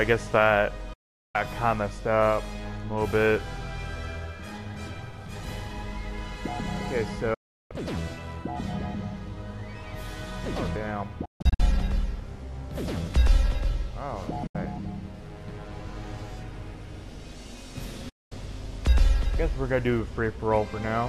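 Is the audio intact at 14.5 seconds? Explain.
No. A digital broadcast dropout runs from 14.47 to 14.55 s. The receiver lost valid frames and muted with an 8 ms fade, so 72 ms of sound is missing, consistent with three lost frames. The waveform flattens briefly, and the spectrogram shows a blank vertical band.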